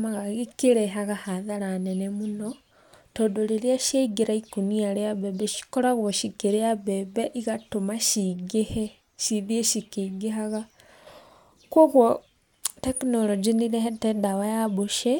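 No technical faults can be heard in this speech recording.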